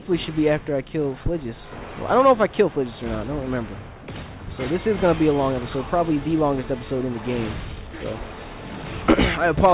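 Nothing in the audio stands out as a technical problem; it just rolls along steadily with nothing jumping out anywhere along the way.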